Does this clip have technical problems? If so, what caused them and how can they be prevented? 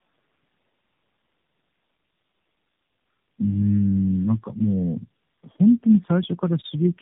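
Yes. Tandem speech coding affects the whole clip. The speech sounds rough, muffled and warbly in a way that points to three speech codecs in a row, such as AMR-NB, then G.729A, then AMR-NB again, with plain G.711 links between them. Each coder re-encodes the previous one's errors, so the damage compounds. A spectrogram would show a hard ceiling at 3.8 kHz with nothing above it, and harmonics below it that look smeared and blotchy rather than cleanly striped. Carrying the call end to end in one codec, through transcoder-free operation or codec negotiation, prevents this.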